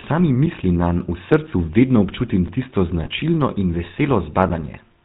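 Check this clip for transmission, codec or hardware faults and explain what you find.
Three faults are audible in this speech clip.

Throughout, the GSM full-rate codec damage is plainly audible: a buzzy, gravelly roughness with nothing above 4 kHz. This comes from a vocal-tract model driven by a sparse pulse excitation, consistent with 13 kbps full-rate coding.

At 2.48 s there is a gap between chunks. It is a short hole of about 7 ms where delivery of 1-second chunks left silence at the join.

From 3.04 to 3.08 s, lost GSM frames cause a brief rough, metallic ring. The decoder repeated the last good frame's parameters, which fits a single lost 20 ms frame.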